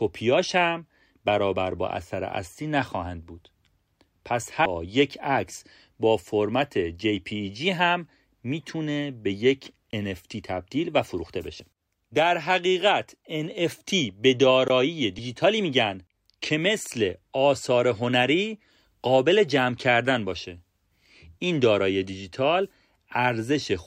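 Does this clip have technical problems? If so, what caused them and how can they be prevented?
Yes. Damaged data in a compressed stream occurs at 4.66 to 4.69 s, 11.60 to 11.63 s and 15.18 to 15.22 s, each a brief fault of about 32 ms in the speech. At each point the encoded bytes were corrupt, so the decoder could not read those frames, lost sync and skipped ahead to the next valid frame header. To prevent this, transfer and store the file with checksums or error correction so corrupt frames are caught and resent.

A block of digital silence appears at 9.91 to 9.93 s, a hole of about 21 ms, and again at 14.68 s, lasting about 18 ms. In both places the signal drops abruptly to silence and returns with no fade. The first gap fits a 1024-sample buffer at 48 kHz that the audio software failed to fill in time. To prevent this, use larger buffers and give the audio thread higher priority so it never misses a deadline.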